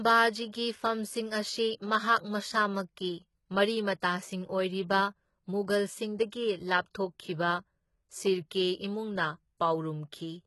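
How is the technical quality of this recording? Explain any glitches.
The recording has heavy compression damage throughout and one brief pre-echo.

HE-AAC compression, throughout: the speech is likely HE-AAC coded at a very low rate, around 16 kbps. The treble is rebuilt from copied lower bands rather than the real signal, so s sounds turn gritty and lispy, with nothing above 11.8 kHz.

Pre-echo, at 4.00 s: coding noise sized for a sharp attack spreads backward into the quiet moment before it, about 18 ms early. A short hiss is audible just ahead of the onset, and the attack itself sounds softened and smeared.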